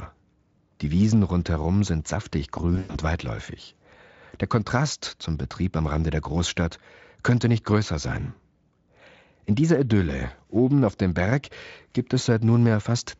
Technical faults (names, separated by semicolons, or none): VoIP packet loss concealed by the speech codec